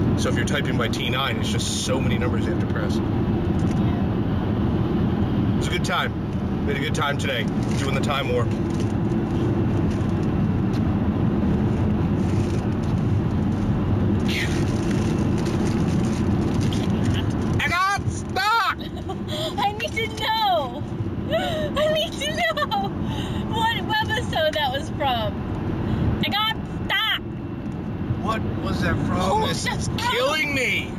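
Throughout the clip there is imaging from linear upsampling. The sound points to a 16 kHz source raised to 44.1 kHz by joining samples with straight lines, a weak filter. The band dulls towards 8 kHz, and a faint mirrored copy of it sits between 8 and 16 kHz, roughly 30 dB down, adding a light metallic shimmer to bright sounds. Unlike plain band-limiting, the top isn't empty. Unlike aliasing, the shimmer mirrors upward instead of folding tones down.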